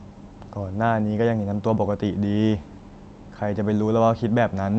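No technical faults can be heard anywhere in the speech. It carries the character of a call path, with the top end stopping at about 8 kHz, which fits an Opus codec running at that bandwidth.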